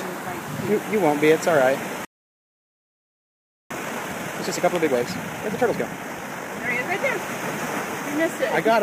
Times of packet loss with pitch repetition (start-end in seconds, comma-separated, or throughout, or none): none